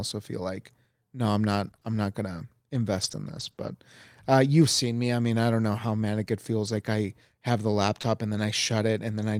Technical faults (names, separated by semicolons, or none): scattered short gaps; lost packet rebuilt from error correction; short concealed packet loss